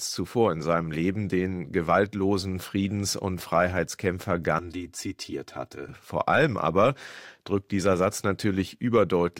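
From about 4.59 to 5.89 s there's a channel delay, so you get comb filtering: one side arrives roughly 3 ms late and the two get folded to mono. Evenly spaced notches appear, the first somewhere around 150 Hz, and the sound turns hollow and phasey.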